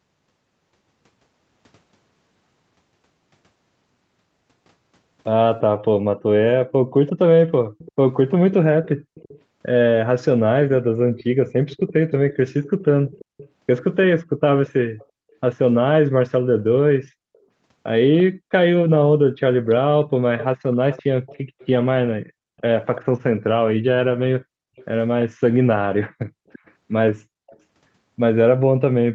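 Speech over a call, with two problems worth flagging. First, background gated by the echo canceller: at 6.1 to 6.21 s and again at 24.49 to 24.73 s the room sound drops by about 40 dB for roughly a tenth and then a fifth of a second, as the canceller clamps the mic down hard while the far-end loudspeaker is active and then releases it. Second, echo leak: from 7.07 to 9.4 s, 11.15 to 15.06 s, 18.18 to 23.01 s and 24.76 to 27.59 s you hear a faint delayed copy of the voice trailing about 0.34 s behind, sitting roughly 15 to 25 dB under the speech and loudest in the 18 s stretch. It's likely a speakerphone on the other end whose canceller didn't scrub everything its mic picked up, so the leftover gets sent back down the line.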